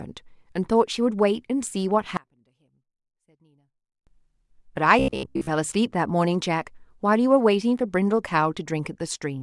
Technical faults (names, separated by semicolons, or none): one channel inverted; robotic sound from repeated short buffers